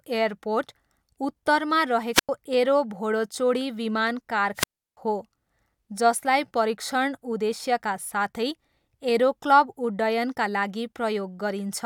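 At 2.13 s the speech breaks up in a wireless microphone squelch dropout lasting 0.16 s, including a mute of about 96 ms. A second, longer dropout runs from 4.55 to 4.97 s, muting for about 335 ms. Each time the radio signal fades, hiss swells, and the receiver's squelch gates the output. On a spectrogram, a broadband noise smear precedes a near-empty vertical gap. The waveform collapses to a flat line before the speech resumes.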